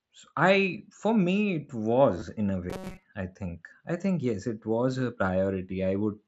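At 2.2 s, just after "I for me it" and before "in a", there is a brief concealed Bluetooth headset packet loss. About 15 ms of audio between headset and phone never arrived, and the receiver bridged the gap by repeating the closest-matching stretch of the preceding waveform. The dropout is short, two lost frames in all. Around it, the wideband mSBC link carries a light graininess on louder syllables.

From 2.70 to 3.04 s, after "in a" and leading into "I think I think", the speech turns into a robotic sound from repeated short buffers. New audio arrived too slowly, so playback kept looping the last few milliseconds instead of moving forward, and most of the real signal in that span was skipped. The loop imposes a fixed buzz at 188 Hz, a period of about 5.3 ms, which points to a likely very short buffer. The result is a stiff, metallic drone that only loosely tracks the speech.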